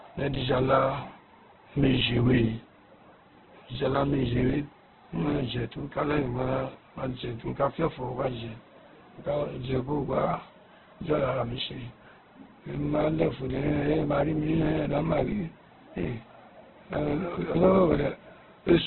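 A speech recording, damaged by heavy compression from start to finish. Nothing is heard above 4.2 kHz, so the sound is narrowband and dull. Consonants lose their edge. The tone is rough and grainy rather than swirly. Bands sound filled with noise instead of left empty. The cause is likely Opus compression in its music mode, starved of bits. The narrow bandwidth and coarse grain fit a rate near 8 kbps.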